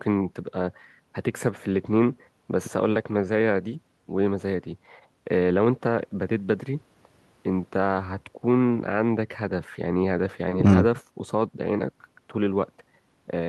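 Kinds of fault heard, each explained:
Nothing here stands out as a technical fault; the speech comes through without any glitches, dropouts or other problems worth pointing to.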